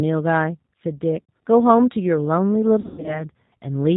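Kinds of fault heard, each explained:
G.729 codec: the speech passes through an 8 kbit/s codec that resynthesises it from a vocal tract filter, pitch prediction and sparse pulses, so it sounds plainly rough and synthetic; a spectrogram shows nothing above 4 kHz and smeared, blocky harmonics throughout.
VoIP packet loss concealed by the speech codec: lost packets are filled by extending the last pitch and filter at falling gain, giving a buzzy or noisy, fading stretch from 1.23 to 1.30 s and a longer broken patch from 2.80 to 3.25 s, seen as flat repeated harmonics and a shrinking waveform envelope.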